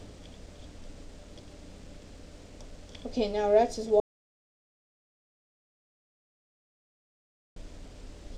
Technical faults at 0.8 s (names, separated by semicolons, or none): none